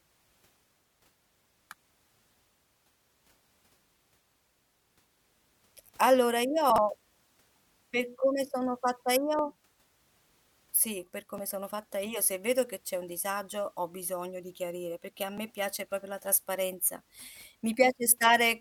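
Chunks out of order at 6.70 to 6.78 s: a 20 ms chunk plays three chunks late, so the speech jumbles briefly at the hard joins.

Overlap between stream segments at 9.39, 11.38 and 15.38 s, on 2-second segment boundaries: overlapping timestamps trim away a few milliseconds, and each is heard as a tiny skip.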